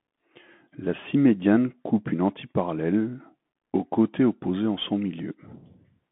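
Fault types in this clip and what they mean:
Bluetooth CVSD headset codec: The speech sounds boxed-in and telephone-thin, with a granular hiss beneath it, scratchy s sounds and roughness on loud, bright syllables, all plainly audible throughout. Nothing reaches above about 3.8 kHz, and the band sits roughly between 150 Hz and 3.5 kHz. This comes from the narrowband headset codec coding each sample as a single up-or-down bit at 64 kbps. Its adaptive step cannot keep pace with fast, loud changes.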